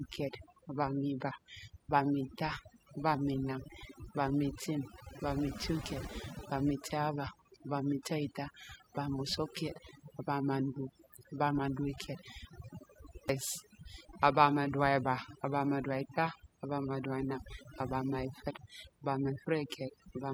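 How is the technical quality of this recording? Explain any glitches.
The recording is compromised by one fault running its full length. Overdone noise removal strips bands near the noise estimate, taking quiet parts of the voice with them and leaving twinkling specks in near-silence and a spectrogram peppered with blank holes.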